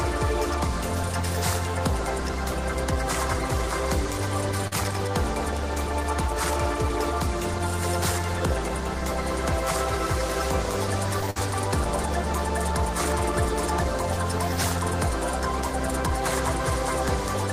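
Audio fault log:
4.67 to 4.73 s: short concealed packet loss. About 40 ms of audio failed to arrive in time, and the receiver covered the hole with roughly 39 ms of synthesised continuation, extending the preceding sound from its pitch or as shaped noise and then blending back into the real signal. It is heard as a brief smear or wobble.
11.30 to 11.38 s: burst of packet loss. About 60 ms of audio went missing, and a gap of roughly 52 ms was filled by continuing the last sound while turning it down as the gap lengthened. A pitched sound becomes a briefly held buzz and noisy material a fading hiss, then playback resumes further on with the lost stretch gone. What sets it apart from the short loss at 4.67 s is that dip in level partway through, and the resulting jump where the audio picks up again.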